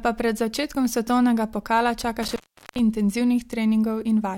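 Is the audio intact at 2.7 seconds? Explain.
No. An intermittent contact fault runs from 2.23 to 2.79 s, so 2.7 s falls inside it. A loose plug or cable connection briefly loses contact, breaking the signal path for about 0.4 s within that span. The speech drops out abruptly, with crackle as the contact scrapes open and again as it reconnects. While the line is open, a faint hiss remains in place of the audio.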